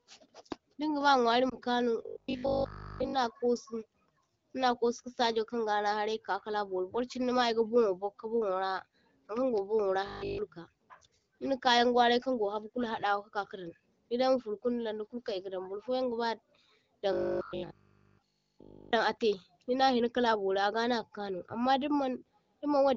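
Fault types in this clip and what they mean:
Lost AMR speech frames: A brief dip or warble in the speech around 1.49 to 1.56 s. Radio errors corrupted one 20 ms frame, so the AMR-WB decoder bridged the gap by reusing the previous pitch and vocal tract settings at reduced gain.
Robotic sound from repeated short buffers: Speech turns into a rigid, metallic 50 Hz buzz that loosely follows the words at 2.06–3.14 s, 10.06–10.38 s after "ankan go burnwora", and 17.13–18.93 s before "a’tai dinna hina kala". This is likely from looping a 20 ms buffer.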